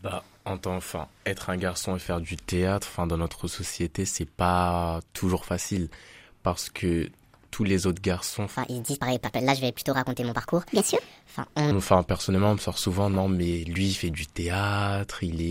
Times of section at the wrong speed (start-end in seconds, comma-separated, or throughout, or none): 8.56-11.71